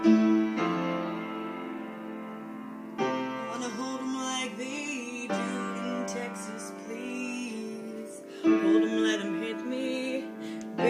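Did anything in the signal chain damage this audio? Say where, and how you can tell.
No, nothing in the signal chain audibly damaged this audio.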